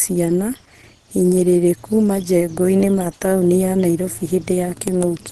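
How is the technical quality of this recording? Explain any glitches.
The technical quality is limited by one fault that runs through the whole speech clip: plainly audible damage, likely from Opus compression at a low bitrate. Nothing is present above about 12.2 kHz, and the voice sounds muffled and hoarse, with a grainy roughness. That points to the codec's hybrid speech mode at a rate near 16 kbps, where it cuts the bandwidth and rebuilds detail coarsely. Unlike MP3 artefacts, it swirls less.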